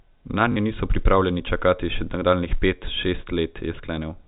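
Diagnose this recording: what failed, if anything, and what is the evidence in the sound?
Network packet loss with last packet repeated: 40 ms lost from 0.52 to 0.56 s, fitting two 20 ms packets, replayed as a short robotic stutter before "niso pripravljeni čakati še".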